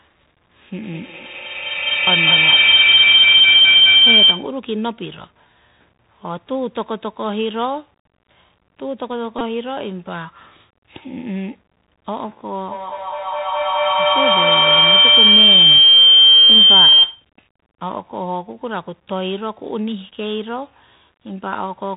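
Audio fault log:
Throughout: Bluetooth CVSD headset codec. The speech passes through the narrowband headset codec, which codes one up-or-down bit per sample at 64 kHz with an adapting step. Nothing survives above 4 kHz, so a spectrogram shows a hard ceiling there. Sibilants sound scratchy, loud bright sounds distort, and a granular hiss sits under everything, visible as a speckled noise floor.
0.83–4.59 s: feedback howl. A microphone-to-loudspeaker loop gains level on each pass. The repeats grow and narrow to a tone near 3 kHz, peaking about 13 dB above the speech and pulsing roughly every 200 ms. A spectrogram shows a bright horizontal band beaded at that rate.
9.39–9.41 s: Bluetooth headset packet repeated. About 19 ms of voice data went missing, and the chip replayed the previous packet's bits. The result is a brief buzzy tick. A waveform shows a short stretch of identical repeating cycles, consistent with several 3.75 ms packets lost in a row.
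12.7–17.32 s: feedback howl. The same loop builds again into a howl near 3 kHz, reaching about 13 dB above the speech and throbbing roughly every 200 ms. It appears as a strong narrow spectrogram band with regular level swells, and the waveform envelope swells in step.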